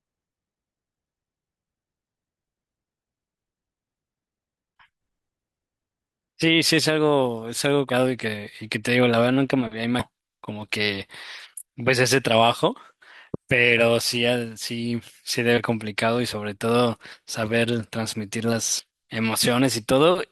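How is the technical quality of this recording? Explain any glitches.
The recording has five dropouts where compressed frames were skipped, at 7.89 to 7.92, 9.99 to 10.04, 15.57 to 15.60, 17.13 to 17.16 and 18.79 to 18.84 seconds. In each case the decoder never played a run of whole 20 ms frames, either because they were missing or because they were rejected as damaged. The speech lurches forward by roughly a fifth to two fifths of a second.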